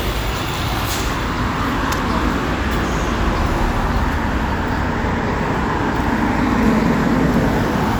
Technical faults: none

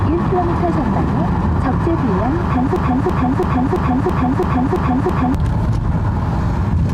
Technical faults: broken-record loop

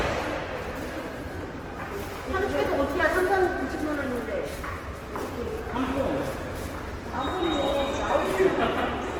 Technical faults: Opus compression

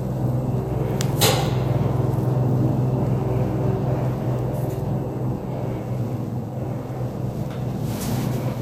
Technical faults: DECT cordless phone buzz

